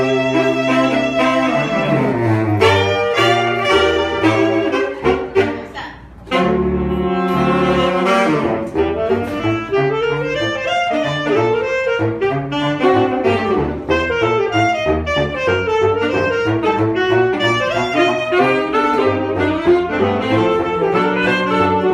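Nothing here trips the ear at all, so there's no technical fault to walk through from one moment to the next.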